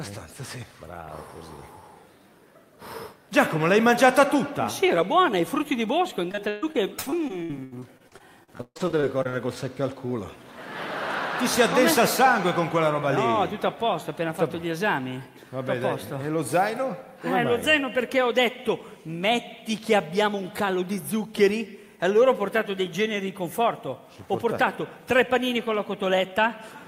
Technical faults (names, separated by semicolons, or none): repeated packet loss (robotic sound)